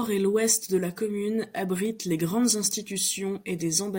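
Speech carrying a run of evenly spaced ticks, one every 0.5 s from about 1.35 s to 3.86 s. These are periodic USB or driver dropouts: at a fixed interval the audio path stalls and a sliver of sound, a fraction of a millisecond, is skipped outright, leaving a small click.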